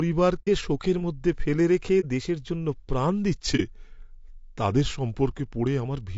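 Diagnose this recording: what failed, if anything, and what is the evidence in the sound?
The speech sounds rough and grainy throughout, with a hiss filling the gaps between the pitch harmonics and a thin, synthetic top band. This is low-delay AAC compression at the codec stage, likely AAC-ELD at a low rate that fits around 32 kbps. The encoder's short frames resolve the voice's harmonics coarsely, and with few bits to spend, it fills the spectrum between them with noise and rebuilds the highest frequencies instead of coding them.

Three soft-edged holes interrupt the sound: 0.41 to 0.48 s, 2.00 to 2.05 s, and 3.56 to 3.61 s. This is AAC frame loss with muting, arising between network and decoder. The decoder zeroed the spectrum of the missing frames, and its overlapping windows faded the sound down and back up. The first gap is about twice the length of the others, which fits two lost frames rather than one.

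From 3.35 s to 5.85 s the speech suddenly runs slower and lower, about 6% slower and roughly 110 cents flat, a little over a semitone. This is a drift correction step at the buffer stage, likely from clock-matching software that changed the playback rate in one jump to refill its buffer. Speed and pitch move together because the samples are simply played out at a different rate.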